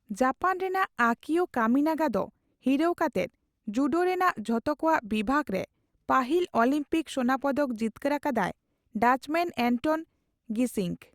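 Listening to the speech recording, nothing stands out as a technical problem at any point.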